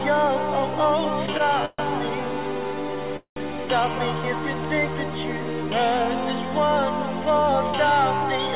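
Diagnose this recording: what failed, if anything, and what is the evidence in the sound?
Short stall from a late packet, jitter-buffer stage, 1.38–1.41 s: the last sound is stretched about 19 ms with a faint buzz or dip, then resumes seamlessly. Nothing is skipped, unlike a dropout.

Call audio freeze at 1.65–1.81 s and 3.17–3.48 s, likely from packets held up in the network: a fading buzz or hiss decays into silence, then the audio continues where it stopped, so it is longer than the stall, with no jump.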